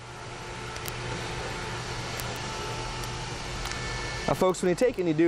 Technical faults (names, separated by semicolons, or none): word clock ticks